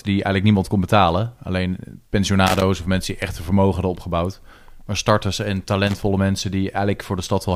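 Irregular bursts of scratchy crackle chop through the speech from 2.47 to 2.62 s and again from 5.87 to 6.03 s: loose connector crackle, from a worn contact briefly making and breaking the signal path.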